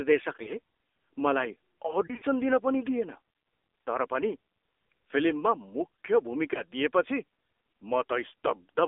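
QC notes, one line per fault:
throughout, AMR narrowband mobile codec: the band is held to about 300 Hz to 3.6 kHz, and a low-rate vocal-tract model gives a plainly buzzy, synthetic timbre, which fits roughly 7.4 kbps.
0.44–0.53 s, 2.06–2.25 s, 6.54–6.62 s, lost AMR speech frames: the decoder reuses the last pitch and vocal-tract settings at falling gain, giving brief dips and warbles. The middle event scatters about 80 ms of loss across 160 ms, with runs up to 40 ms.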